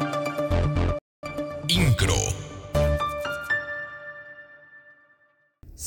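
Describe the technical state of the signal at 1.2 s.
The output is silent at that moment, in the middle of a playback stall running from 0.99 s to 1.23 s. The sound cuts off abruptly mid-flow and stays off for about 240 ms, a clearly audible hole. It then picks up again. The likely cause is the player's buffer running dry, or its playback thread being held up, so nothing reached the output until it recovered.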